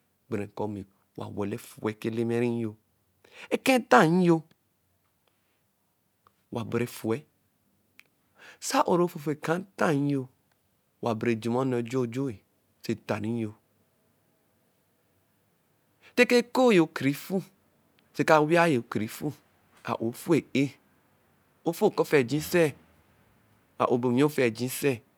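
No technical faults can be heard anywhere in the recording. The speech continues without any break or disturbance.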